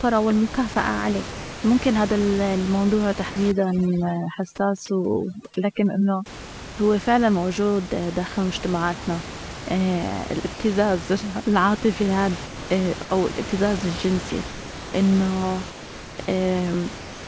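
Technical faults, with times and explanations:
0.74–0.76 s, 1.32–1.64 s, 3.30–3.36 s, 4.86–4.88 s, 10.54–10.60 s and 16.98–17.28 s, sound dropped by the voice detector: the sender's detector likely judged quiet speech to be background and stopped transmitting. The receiver filled each gap with comfort noise, so the speech is replaced by flat noise for between 20 and 320 ms.
3.52–6.26 s, overdone noise removal: a noise reducer set too aggressively cuts individual frequency bands wherever they come close to its noise estimate. The background drops and breaks up into twinkling specks, and quieter parts of the speech are removed too.
12.46–14.94 s and 15.70–16.28 s, sound chopped by the voice detector: the detector likely toggled between sending and muting several times. Comfort noise stands in for about 820 ms and 500 ms of the speech, leaving two or more holes in each stretch.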